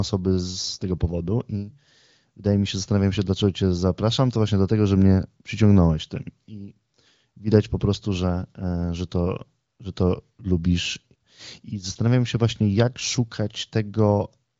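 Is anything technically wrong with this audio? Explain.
No, nothing's actually wrong here; it's speech carried over an AMR wideband (HD Voice) link at 18.25 kbit/s, a comfortable rate for that codec, so the top end simply stops around 7.6 kHz, as that kind of call audio does.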